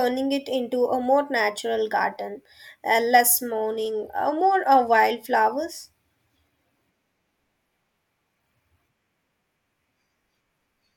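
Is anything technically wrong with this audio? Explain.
Yes. From 3.51 to 5.36 s, just after "natural garden uh less", there is a Bluetooth SBC bit pool drop. When a congested wireless link forces the SBC encoder to spend fewer bits per frame, the highest sub-bands get almost nothing and the remaining bands are quantised coarsely. The change fits a bit pool falling from 31 to 16, around 110 kbps. The speech loses its treble and takes on a gritty, grainy noise until the rate recovers.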